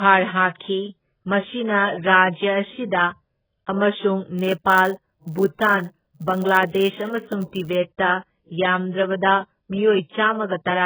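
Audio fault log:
Throughout: AAC compression. The upper frequencies are cut off, so the speech sounds dull and muffled. Heavy coding damage adds a smeared, warbling texture to vowels and sibilants. This likely comes from AAC-LC at a very low bitrate, near 8 kbps.
4.38 to 7.77 s: filter restarted on every block. A steady buzz near 100 Hz sits under the speech. It rises and falls with the speech level. A filter starting each block from silence makes a small transient every time, which fits blocks about 10 ms long.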